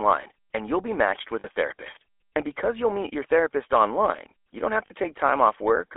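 The GSM full-rate codec runs throughout this speech clip, giving a buzzy, gravelly roughness consistent with 13 kbps full-rate coding. The codec models the vocal tract and drives that model with a sparse train of regular pulses, discarding two of every three excitation samples, so fine detail turns into grit. The sound is confined to a telephone band of roughly 300 Hz to 3.5 kHz, and the codec damage is plainly audible. Lost GSM frames occur from 1.40 to 1.47 s, just after "you'll be matched with", and from 4.86 to 4.91 s, just after "online you don't have". Each gap lasts about 40 ms, which fits two 20 ms frames. The decoder covered each gap by reusing the last good frame's parameters, which briefly freezes the sound into a rough, metallic ring.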